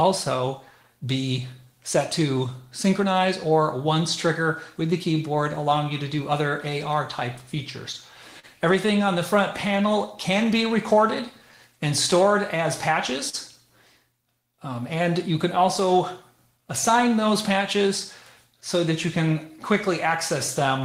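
The whole 21-second clip has clock drift between sender and receiver: the sending end's clock runs slow, by roughly 4 percent, so the receiver's buffer keeps draining and it has to stretch things out to keep going. That shows up as repeated timing corrections from about 0.02 s right through to 20.81 s. The receiver keeps repeating tiny slivers of audio, all in the same direction and at uneven spacing, so playback runs at about 97 percent speed and ends up padded by something like 0.7 s overall. Each individual edit is small, so you hear it as a slightly unsteady tempo and the odd faint hiccup rather than anything obviously broken. On top of that there are two short stalls from a late packet, at 8.39 to 8.45 s and at 13.29 to 13.35 s. In each case the buffer ran dry, and the receiver held the last bit of sound for 39 ms and then 41 ms until the packet turned up, then carried on from the same spot. 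Nothing actually goes missing, but that held sound has a little buzz or sag to it, and each stall pushes the delay out by the same amount. Finally, from 16.57 to 20.72 s there are scattered short gaps, about four of them, where packets went missing or arrived late one at a time. Each hole got patched by extending the preceding sound, none longer than around 10 ms and only a fraction of the stretch in total, so they come across as brief ticks or small smears rather than dropouts.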